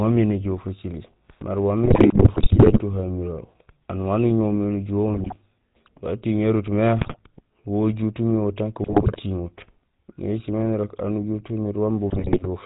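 GSM full-rate codec coloration runs through the whole speech recording, with a buzzy, gravelly roughness and nothing audible above 4 kHz, which fits the 13 kbps full-rate coder. The codec rebuilds the voice from a vocal-tract filter driven by a regular pulse train, and it keeps only a third of the excitation samples, so the fine detail of the voice is replaced by a coarse, rasping texture. GSM bit errors break into the sound at 1.84 to 2.80 s, 5.14 to 5.37 s, 6.98 to 7.23 s, 8.82 to 9.19 s and 12.10 to 12.47 s, with the first burst the longest and most severe. Corrupted bits reaching the decoder scramble the filter, pitch and gain parameters frame by frame, so the spectrum warps and the level jumps, producing squawks, pops and gargling that break up the voice within each burst.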